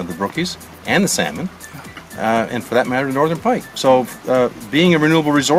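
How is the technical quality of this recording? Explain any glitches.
No glitches can be heard anywhere in the recording, so there is nothing to explain.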